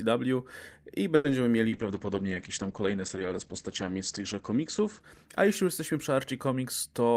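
From 1.15 to 1.25 s the speech holds on one sound for about 90 ms with a slight buzz or dip: a short stall from a late packet, stretched until it arrived.

At 1.30 s a brief smear replaces about 10 ms of audio, a short concealed packet loss the receiver covered by extending the previous sound.

From 1.7 to 6.63 s the speech turns rough and muffled. This is a call bitrate drop from 48 to 12 kbps, with bandwidth narrowing from 20 kHz to 8 kHz. It stays at the lowest rate for 2.62 s.

From 6.86 to 7.10 s the speech sounds hurried at unchanged pitch. A jitter buffer speed-up plays it at 114% speed, trimming roughly 40 ms of pitch periods.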